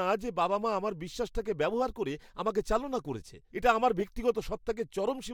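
At 4.0 s, after "চালনা করেছে এটা আমার", a corrupt frame decoded makes a short chirp, squeak, blip or burst of noise. Flipped bits in one frame put energy at wrong frequencies.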